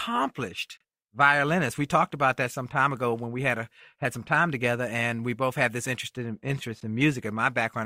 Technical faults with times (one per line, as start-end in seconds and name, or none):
0.77-0.80 gap between stream segments
6.80 gap between stream segments